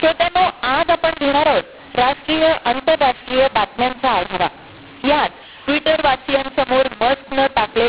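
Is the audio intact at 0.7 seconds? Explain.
No. A mu-law and A-law mix-up runs through the whole clip: A-law telephone samples decoded with the mu-law curve scramble levels, leaving the speech harsh and distorted and the pauses noisy.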